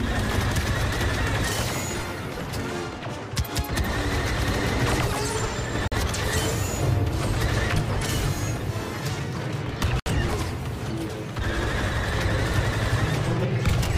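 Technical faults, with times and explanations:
5.88–5.92 s and 10.00–10.06 s, Bluetooth stall: the audio drops to dead silence twice, for about 43 ms and then 64 ms, and then resumes. That's likely a wireless hiccup where interference held up packets, the headphones' buffer emptied, and playback sat idle until the resent data arrived. The cut is abrupt rather than a fade, which gives it that brief hole-in-the-sound quality.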